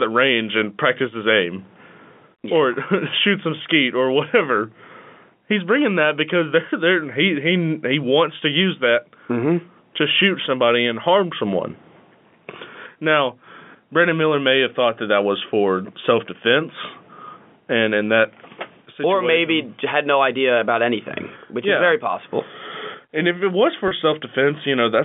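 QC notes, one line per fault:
23.88–23.91 s, packet loss with pitch repetition: just after "if it was", about 30 ms of sound drops out, consistent with a single lost packet. The receiver bridges it by repeating the last pitch period, heard as a brief held buzz over the telephone-band G.711 signal.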